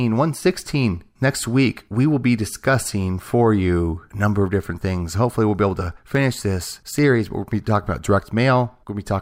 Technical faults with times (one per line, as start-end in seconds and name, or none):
6.15 dropped samples
6.98 dropped samples